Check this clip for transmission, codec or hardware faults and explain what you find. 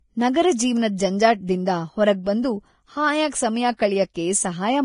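Two codec faults are audible in the speech, one continuous and one brief.

Throughout, nothing remains above 10.6 kHz, and the remaining treble is grainy and hissy. This is likely Vorbis compression at heavy settings, consistent with a bitrate near 29 kbps, where coarse quantisation turns fine detail into noise.

At 4.14 s, pre-echo puts about 16 ms of hiss before a sharp attack. The codec spreads block-wide quantisation noise into the quiet moment ahead of the attack, smearing its onset.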